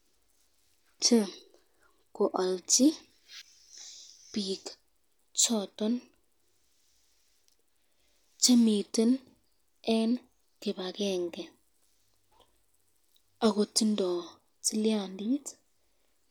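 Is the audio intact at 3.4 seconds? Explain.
No. At 3.42 s the speech jumps forward, dropping about half a second of audio. This is compressed frames skipped: a handful of whole frames were never played, either missing from the file or rejected by the decoder as damaged. The gap fits frames of roughly 93 ms each.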